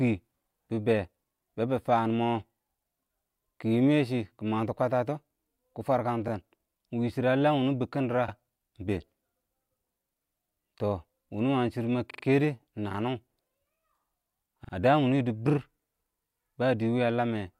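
Repeated frames stutter the speech at 6.27 to 6.29 s after "kwətətɔ kɪ", 8.28 to 8.32 s, 12.10 to 12.22 s after "wʊnɔ wəng shɪdɔ mə" (replayed three extra times), and 14.63 to 14.72 s before "ə fdəəm wʊnʊng yɪdɪbɪr". Each replays a 21 or 43 ms block, fitting roughly 21 ms codec frames. These appear as identical repeated waveform and spectrogram slices.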